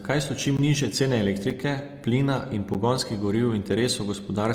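Throughout, the speech sounds grainy and rough, with plainly audible damage. The likely cause is Opus compression in its music (CELT) mode at a low rate, around 24 kbps. On a spectrogram, the bands stay filled with noisy texture rather than holes, extending to about 20.2 kHz.

Blocks of digital silence occur at 0.57 s (17 ms), 1.5 s (5 ms, fitting a 256-sample block) and 2.74 s (11 ms, fitting a 512-sample block). Each is heard as a tick or brief hole, and each appears on the waveform as a flat line with abrupt edges.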